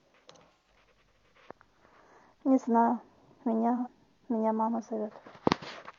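A speech clip with two brief dropouts from AAC frame loss with concealment, at 0.53 to 0.70 s and 3.77 to 3.88 s. Each gap lasts roughly 130 ms and 85 ms respectively, which fits two or three lost frames. The decoder patched the missing stretches by reusing the last good spectrum, so instead of silence each spot becomes a short smeared, noisy or phasey blur where the speech detail briefly disappears.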